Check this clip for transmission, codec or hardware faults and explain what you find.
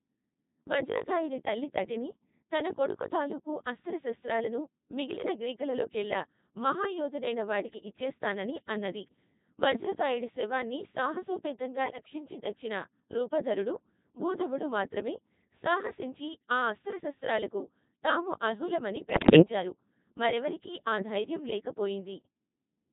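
Two faults are present: heavy vocoder processing and two short bursts of corrupted frames.

The speech runs through a Codec 2 vocoder throughout, with a robotic, buzzy timbre that points to the 2.4 kbit/s mode. Unlike ordinary low-bitrate codec smearing, the waveform is resynthesised from sine waves and pitch parameters.

Bit errors on digital voice radio occur at 11.86–12.14 s and 19.10–19.42 s, about 3 percent and 7 percent of bits flipped. Corrupted frame parameters cause pitch and level jumps and warbling bleeps, not the silent gaps of dropped packets.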